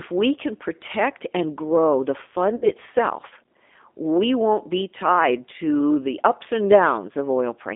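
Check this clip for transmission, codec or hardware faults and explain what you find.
Two faults are present: coding damage across the whole recording and one concealed packet-loss gap.

G.729 codec, throughout: the speech is rebuilt from a vocal tract filter, a pitch predictor and sparse pulses, which fits an 8 kbit/s G.729A link. It sounds plainly rough and synthetic. On a spectrogram, energy sits only between 250 Hz and 3.6 kHz, with smeared harmonics.

VoIP packet loss concealed by the speech codec, 2.56 to 2.70 s: 60 ms went missing, which fits three lost packets. The decoder repeated its last pitch and filter at falling gain, so the sound is stretched into a buzzy tone or coloured noise that fades. The waveform shows a decaying stretch.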